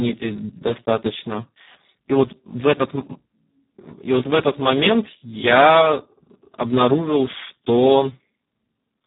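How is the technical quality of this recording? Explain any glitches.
Quality is poor: the speech carries heavy Speex codec damage for its whole length. Speex, a CELP coder, has almost no bits for the excitation here, so the voice comes out noisy and hoarse, with nothing above 3.8 kHz, consistent with a setting near 4 kbps.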